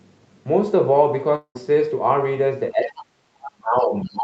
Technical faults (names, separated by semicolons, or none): long network dropout; speech suppressed in double talk; other side's voice leaking through